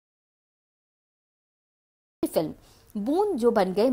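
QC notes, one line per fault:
0.00–2.23 s audio dropout to silence: the clip opens already inside a gap of silence, with no room tone or noise floor at all, and sound resumes abruptly at 2.23 s. This is most likely lost input, with silence written in place of signal.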